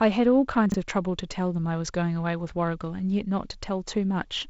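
From 0.66 to 0.74 s the speech jumbles briefly: chunks out of order, one 20 ms chunk arriving three chunks late, creating hard joins.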